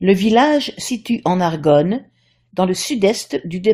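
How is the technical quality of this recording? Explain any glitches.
The speech jumps forward twice where compressed frames were skipped. At 0.87 s the decoder lost or rejected a run of frames, and the audio leaps ahead by roughly 200 ms, about ten 23.2 ms frames. At 3.17 s a shorter gap of around 50 ms drops out, about two frames. At each join the speech resumes further along.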